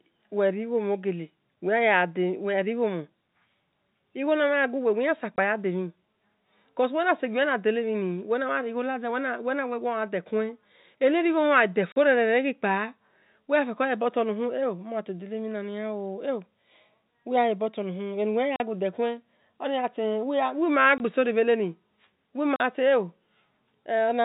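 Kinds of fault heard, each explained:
Packet loss filled with silence: Packets went missing in transit and the receiver played silence in their place. The speech is cut by hard-edged holes of 20 or 40 ms, which fits 20 ms packets, one falling just before "story bheteni".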